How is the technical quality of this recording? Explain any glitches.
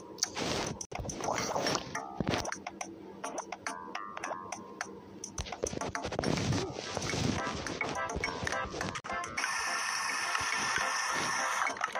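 Two short holes in the sound mark the recording, at 0.85 to 0.93 s and 9.00 to 9.06 s. Both are likely Bluetooth dropouts: packets missed their delivery window to the headphones and were discarded, muting output. Unlike an underrun, which pauses and resumes where it stopped, the sound here returns further along, as though it kept playing through the silence.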